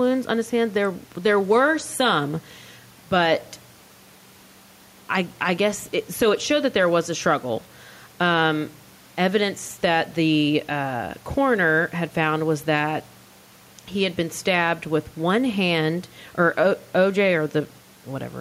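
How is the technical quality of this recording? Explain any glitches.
Nothing in the recording stands out as a glitch; there are no dropouts, clicks or other technical hiccups to point to.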